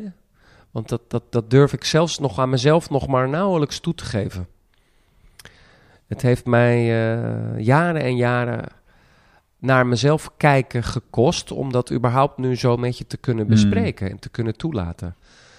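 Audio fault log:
No fault found in this speech clip.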